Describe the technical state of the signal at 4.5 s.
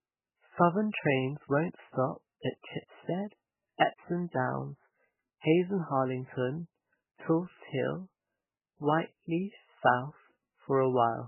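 At 4.5 s the speech is passing through what is likely heavy MP3 compression, present across the whole clip rather than just this moment. Starved of bits, the encoder has discarded everything above 3 kHz and is zeroing weak frequency lines that flicker in and out between frames, damage that points to a bitrate near 8 kbps. The result is dull, band-limited sound with a watery, swirling texture, metallic chirps on s sounds, and smeared attacks.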